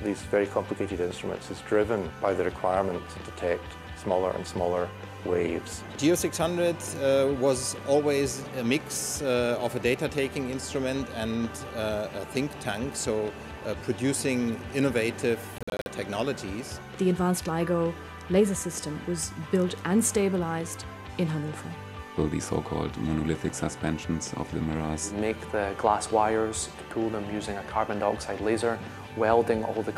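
From 15.58 to 15.88 s, the sound breaks up in a burst of short gaps. This is a Bluetooth dropout, likely caused by audio packets arriving too late at the headphones and being discarded. Each lost stretch becomes silence with abrupt edges or a fade of a few milliseconds. About 162.5 ms of sound goes missing, scattered across roughly 279 ms, and the longest single gap lasts 46.4 ms. The audio then carries on from a later point, as if it had kept playing.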